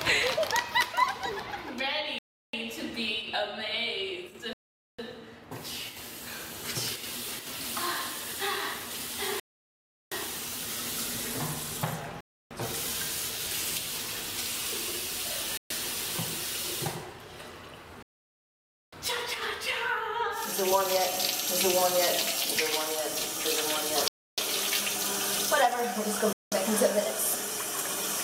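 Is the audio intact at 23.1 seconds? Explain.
Yes, the audio at 23.1 seconds is intact, with no dropout, glitch or other fault at that moment.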